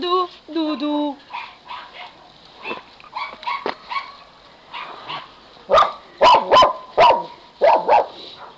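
Nothing stood out on listening, with the audio carrying nothing above 8 kHz as expected from a call path that sounds like G.722 at 64 kbps.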